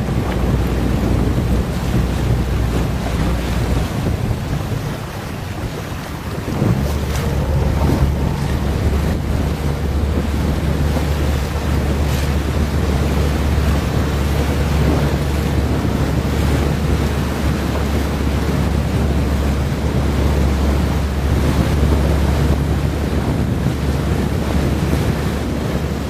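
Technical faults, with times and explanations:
20.93–25.75 s, digital radio blending to analogue: the receiver lost its digital stream and cross-faded over about 447 ms to the FM broadcast, then back, adding hiss roughly 35 dB down and a level change of about 1 dB. A spectrogram shows a raised broadband noise floor across that span, and the waveform shows a small step in level.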